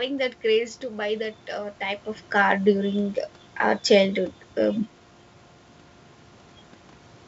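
No technical faults are audible.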